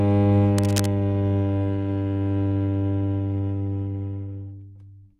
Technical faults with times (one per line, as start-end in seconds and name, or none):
0.58-0.88 cable scratch noise